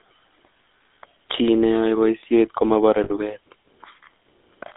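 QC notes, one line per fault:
Throughout: GSM full-rate codec. The speech carries a plainly audible buzzy, gravelly roughness. The codec models the vocal tract and excites it with a regular pulse train built from only every third excitation sample, which coarsens fine voice detail. The band is confined to roughly 250 Hz to 3.7 kHz, so the sound is thin and lacks air above that range. The overall character is consistent with a 13 kbps full-rate stream.
3.04–3.11 s: lost GSM frames. A gap of about 60 ms, which fits three consecutive 20 ms frames, is bridged by repeating the last good frame's parameters. This produces a brief rough, metallic ring in place of the missing speech instead of a clean dropout. The loss is short, so the concealment holds the sound only briefly and does not decay to silence.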